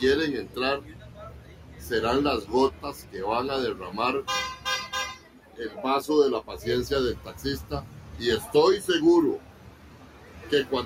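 A noise suppressor applied to music or sounds is active throughout. It treats sustained material as noise, and gain swings of around 10 dB make the audio pump and thin. Sound cut by the noise suppressor is turned down at 0.8–1.91 s (about 9 dB), 2.71–3.14 s (about 8 dB), 5.16–5.59 s (about 9 dB), 7.87–8.18 s (about 7 dB) and 9.39–10.52 s (about 9 dB). In each of these spans, held portions and decays sink while onsets pass.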